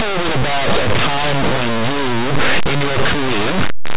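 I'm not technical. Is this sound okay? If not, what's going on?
No. From start to finish, roughly 4 seconds, the speech sounds harsh, buzzy and blown out, as if played far too loud through a broken speaker. This is linear audio read as companded: the sound was saved as plain 8-bit numbers, but the player decoded them as mu-law, a format that squeezes and stretches values. Small numbers just to one side of zero get blown up to near maximum loudness, which creates the constant crunch.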